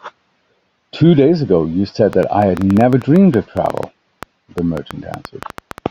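From 2.13 s to 5.79 s the speech carries a train of clicks: about thirty sharp, similar pops at roughly 7.4 per second, spaced unevenly and continuing through the pauses. Their peaks stand a few decibels above the speech itself. The likely cause is electrical interference or a faulty connection or power supply injecting repeated pulses. On a waveform they show as thin vertical spikes; on a spectrogram, as narrow full-height broadband lines scattered irregularly across that span.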